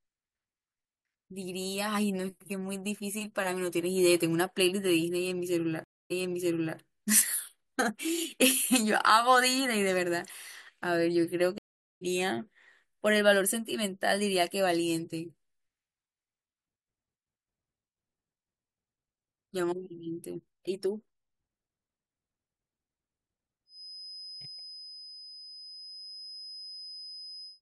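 Stream reconnects at 5.84 s and 11.58 s: the connection dropped, playback went silent, and a fresh decoder restarted mid-stream. The first gap lasts 0.26 s, then the speech resumes about 0.67 s earlier, replaying a stretch. The second is 0.43 s of silence, resuming roughly 0.2 s later, skipping a little.

A feedback whistle runs from 23.65 s to the end. A thin, steady tone at 5 kHz, about 15 dB below the speech and swelling and fading slowly in level, sits behind the sound, likely from a loudspeaker-to-microphone loop held just short of runaway feedback.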